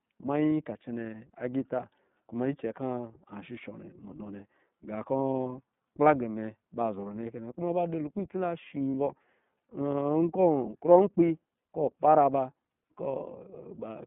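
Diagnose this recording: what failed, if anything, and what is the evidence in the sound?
Codec stage: the whole recording carries iLBC codec damage that is plainly audible. The sound is band-limited to roughly 150 Hz to 3.6 kHz and has a rough, synthetic edge. That pattern fits iLBC's 13.33 kbps mode, which codes each 30 ms frame independently.

Network stage: there are lost iLBC frames at 8.91–8.94 s. For about 30 ms the sound turns into a brief held, buzzy vowel where the decoder repeated the last pitch cycle with added noise. This points to a single lost packet. Normal sound returns immediately afterwards because each iLBC frame stands alone.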